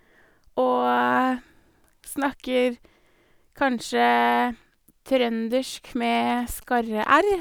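Speech carries GSM signalling bursts from 6.15 to 7.34 s: a galloping dit-dit-dit of brief 217 Hz buzzes, well below the speech, as a nearby 2G phone's radio bursts are rectified. Their grouped, stop-start rhythm marks signalling rather than the continuous buzz of an active call.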